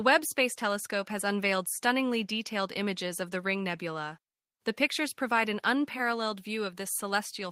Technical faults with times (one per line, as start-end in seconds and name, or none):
none